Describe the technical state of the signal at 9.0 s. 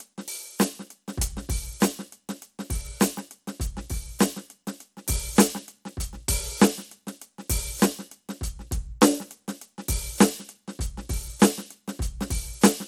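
At 9.0 s the music has a gritty, grainy edge, with treble that flickers and nothing above 17 kHz. This damage runs through the whole clip and is likely Bluetooth SBC compression at a small bit pool, which fits about 96 kbps, starving the top sub-bands and coarsely quantising the rest.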